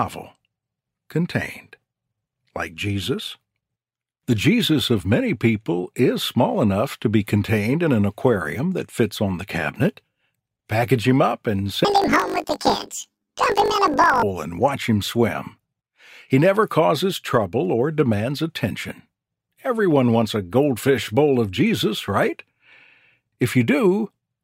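From 11.85 to 14.25 s, the sound turns into a robotic buzz. This is planar audio read as interleaved. Each 20 ms block stores all left samples, then all right samples. The reader treats them as alternating left-right pairs. So each block plays twice at double speed, one octave up, first the left half and then the right. The overall pace holds. With blocks this short, the octave shift is not clearly heard. Instead, a buzz at 50 Hz, the block rate, dominates.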